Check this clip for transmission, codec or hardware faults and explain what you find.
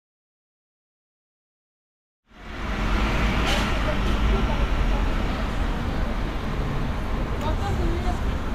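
No faults can be heard; the opening fade-in is intentional.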